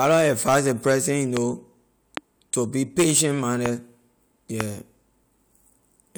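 Loud pops strike at 1.37–1.39 s, 2.17–2.19 s just before "to be patient", 3.66–3.68 s right after it, and 4.61–4.63 s. Each is a single sharp click about 15 dB above the speech, likely a voltage transient. They appear as tall, narrow waveform spikes and thin, full-band spectrogram lines.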